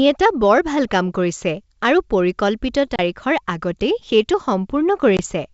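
Packet loss on an ADPCM call hits at 2.96 to 3.00 s and again at 5.17 to 5.19 s: hard gaps of about 30 ms and 20 ms of silence, a few packets each. The decoder's predictor and step size lose track, so the speech comes back with brief distortion.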